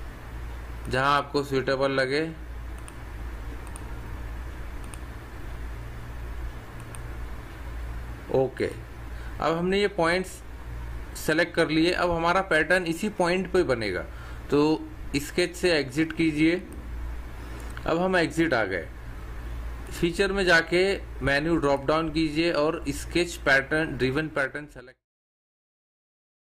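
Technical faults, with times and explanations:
Nothing here counts as a fault; the level just eases down in a smooth, deliberate fade-out that starts around 24 s and finishes at 25.07 s, exactly as an editor would shape the ending.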